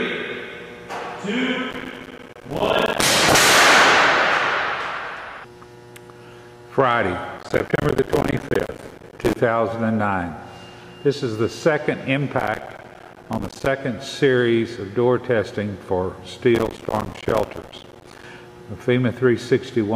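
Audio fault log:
1.71–3.03 s, 7.37–9.36 s, 12.38–13.66 s and 16.55–18.24 s: processor overload crackle. The processor keeps missing deadlines and drops tiny silent gaps, which fits buffers of roughly 5 ms, so each burst sounds like gritty tearing.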